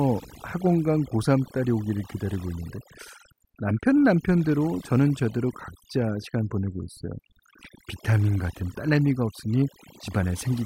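Speech sits over a background that drops and breaks up into twinkling specks for the whole clip. That is overdone noise removal: a reducer set too aggressively cuts individual frequency bands near its noise estimate, stripping quieter voice detail along with the noise.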